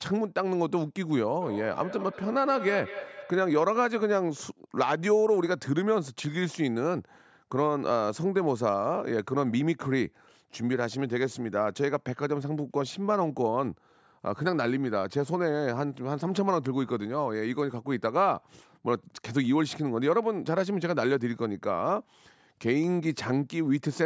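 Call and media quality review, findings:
Feedback echo between two devices, 1.41–3.76 s. Speech keeps coming back at roughly a fifth-of-a-second spacing, each pass thinner and ringier, peaking about 12 dB under the talker. Probable component: a second device in the room replaying this mic's audio. Its canceller only removes its own playback, so the loop survives. Call mic processing band-limits to 8 kHz, as expected.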